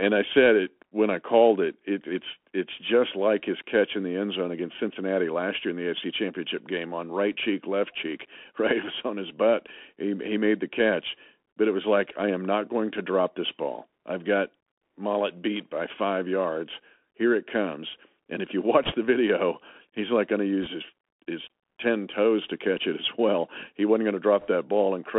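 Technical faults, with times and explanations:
Throughout: Bluetooth CVSD headset codec. The speech is boxed into a narrow telephone band, roughly 250 Hz to 3.4 kHz, with no air above it. A grainy hiss sits under the voice, s sounds come out scratchy, and loud bright passages smear and distort. That points to a 64 kbps CVSD link, which sends one bit per sample saying only up or down. Its adaptive step can't keep pace with fast, loud high-frequency movement, so it slopes over and distorts, and its coarse steps leave granular noise.
18.84–18.93 s, 20.63–20.67 s and 24.40–24.48 s: bit errors on a Bluetooth voice link. Each is a brief burst of rushing crackle, not a sharp click. The first comes after "if you", just before "the video he's like", and the second after "he's like going to", just before "his his ten toes". Bits flipped at around one to two percent. Every CVSD bit nudges the waveform by only one small step, so each wrong bit adds a little noise that fades, and the errors blur into a rough wash.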